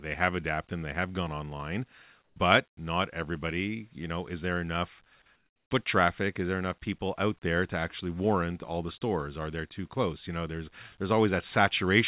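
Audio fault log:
2.24–2.36 s and 5.36–5.70 s, comfort noise in place of the background: the pauses' real background turns into smooth, featureless hiss, about 2 dB louder then about 4 dB quieter, likely from discontinuous transmission. Spectrograms show flat, texture-less patches. Waveforms show a stepped noise floor.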